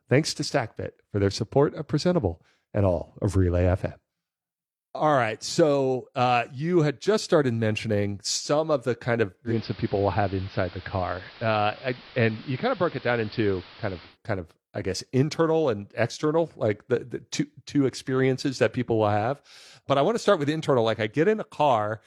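At 9.44 s, after "of the kind of", the receiver lost its digital signal and blended over 136 ms to the AM analogue broadcast until 14.18 s, before "kind of I guess". The speech drops about 2 dB and gains audible hiss.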